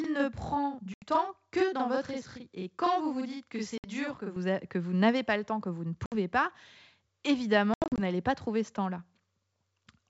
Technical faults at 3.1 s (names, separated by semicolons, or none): channel delay (doubling)